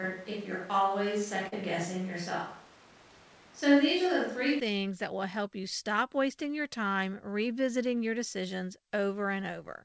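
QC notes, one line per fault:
0.00–4.60 s, switch to a distant microphone: the speech is already roomy and hollow when the clip begins, thin in the low end, with a room noise floor sitting only about 25 dB under the speech, then turns close and full at 4.60 s. The loudness barely changes across the switch. This points most likely to the close microphone dropping out and a far-off pickup covering the opening, so room reflections and ambience replace direct sound.
1.48–1.54 s, short concealed packet loss: a brief smeared wobble where the speech briefly sounds stretched, then blends back into normal sound. About 40 ms of audio never arrived at the decoder in time, so the receiver synthesised a stand-in by extending the preceding sound, then cross-faded into real audio. The call path carries nothing above 8 kHz, which fits a G.722 wideband codec at 64 kbps.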